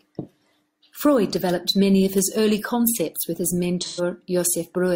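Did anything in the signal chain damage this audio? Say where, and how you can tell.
Yes. There is AAC frame loss with concealment at the codec stage, from 3.81 to 4.01 s. About 128 ms of decoded audio is missing, which fits roughly three lost AAC frames. The decoder had no data for that stretch, so it rebuilt it from the last good spectrum, reusing that energy with altered phase. The speech there turns smeared, noisy or phasey for a moment before clean decoding resumes.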